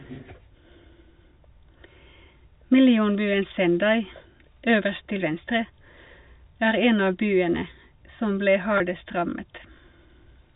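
Speech over G.711 telephone coding, with nothing above 4 kHz on a spectrogram. From 8.78 to 8.80 s, packet loss with pitch repetition fills a 20 ms gap, consistent with one lost packet, giving a briefly held, buzzy tone. The waveform shows repeated pitch cycles fading out there.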